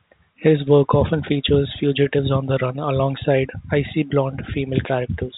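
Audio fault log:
Nothing here needs logging, just ordinary telephone-band speech with the usual G.711 A-law top end that stops around 3.8 kHz.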